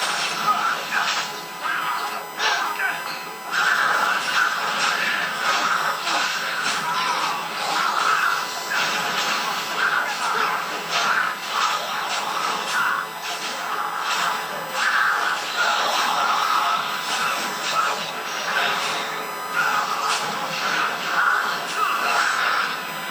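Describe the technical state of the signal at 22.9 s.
At 22.9 s you've still got the USB whine that runs through the whole clip: a steady, fixed-pitch tone sitting right at 1 kHz, only around 15 dB under the sound. That 1 kHz pitch points to the USB bus's 1 ms frame timing, where current pulses drawn by the interface leak into the audio through the power or ground. It is heard as a whine.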